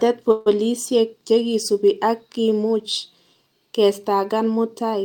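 Right near the start, from 0.31 to 0.48 s, there's a call audio freeze. The speech stalls and the last bit of sound gets stretched into a buzzy or hissy, fading hold for about 146 ms, never quite dropping to silence. Then it picks up exactly where it left off, so nothing's lost, but everything after sits about 146 ms later. That's most likely packets held up in transit, leaving the jitter buffer empty so the receiver had to fill the gap.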